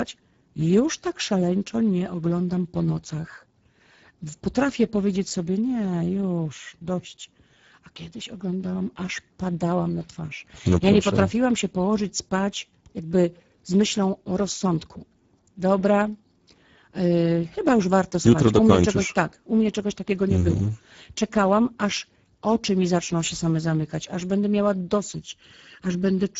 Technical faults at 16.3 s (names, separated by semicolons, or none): Speex codec